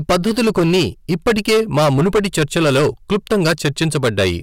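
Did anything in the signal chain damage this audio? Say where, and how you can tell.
Yes: hard clipping throughout the speech, driven about 13 dB past full scale at the converter or format stage, flattening roughly 15% of samples into harsh fuzz rather than soft saturation's rounded warmth.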